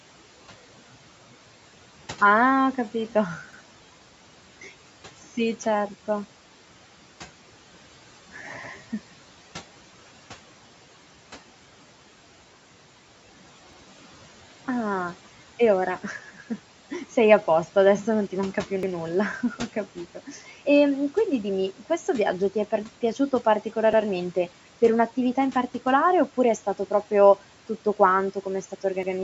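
Overlapping chunks show up every 5 s, at 3.53, 8.63, 13.73 and 18.83 s (right after "non ti manca più"): each join replays 100 ms, giving a little stutter. Between 20.15 and 20.52 s the noise suppressor cuts speech, pulling it down by about 10 dB for roughly 150 ms in total, so it sounds swallowed. The same chunk overlap stutters again at 23.93 s after "ti è par piaciuto" and at 29.03 s after "tutto quanto come è".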